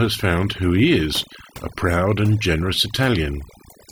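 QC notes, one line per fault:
Throughout: overdone noise removal. A noise reduction stage has been pushed too hard on this speech, so individual frequency bands are pulled far down or shut off whenever their level sits close to the estimated noise floor. Quiet components of the voice fall below that threshold and vanish along with the noise, while the background drops and breaks up into twinkling specks where isolated bands flicker back through.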